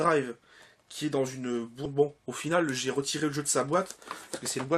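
A skip ahead at 1.85 to 1.87 s drops roughly 0.7 s of audio that was already queued. Playback jumps forward with no fill, so the two sides of the missing stretch butt together almost directly and a chunk of sound simply vanishes.

A jitter buffer speed-up follows from 1.95 to 3.75 s. Having built up excess delay, the receiver trims short pitch-period pieces repeatedly, removing about 0.2 s in total. The sound runs at 111% speed with unchanged pitch and comes across as hurried.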